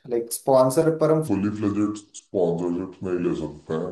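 A speech recording with a section at the wrong speed from 1.28 s to the end: playback drops to 0.74 times normal, so the voice turns slow and deep, roughly five semitones lower, likely from a clock mismatch. Tempo and pitch fall together at once, unlike a pitch shift or gradual tape drag.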